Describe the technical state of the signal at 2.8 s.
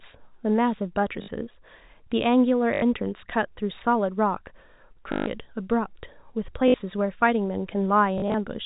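At 2.8 s the signal sits inside a stretch of packet loss with the last packet repeated, running from 2.74 to 2.82 s. About 80 ms of audio went missing, which fits four 20 ms packets, and the receiver kept replaying the last good packet until fresh data arrived. The loop buzzes at around 50 Hz, a brief robotic stutter over the narrowband telephone-coded speech.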